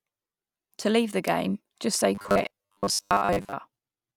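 Audio likely arrived too seldom from 2.15 to 3.55 s, so brief snippets looped: robotic sound from repeated short buffers, a rigid 100 Hz buzz.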